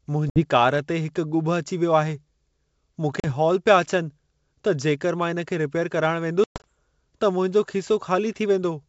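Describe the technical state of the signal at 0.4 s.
At 0.4 s the signal sits inside a packet loss on an ADPCM call, spanning 0.30 to 0.45 s. About 60 ms of audio, a few packets, drops out as a hard-edged silence. The decoder's predictor and step size then restart out of step with the sender's, so the speech returns with brief, slight distortion before settling.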